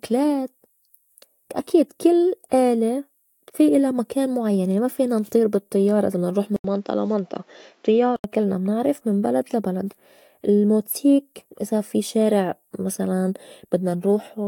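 Speech, in which after "بالطيّارة إذا بدنا نروح" an 80 ms waveform gap at 6.56 s precedes a spectrogram band cut at 7.6 kHz and a faint new noise floor until 8.24 s, before "كلنا منعرف من بلد". This is likely an input switched to a poorer device.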